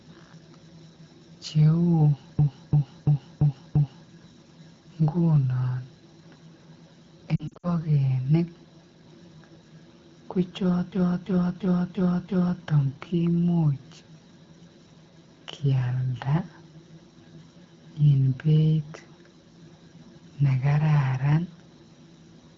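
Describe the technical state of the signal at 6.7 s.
At 6.7 s the speech comes through intact, with no fault at that moment.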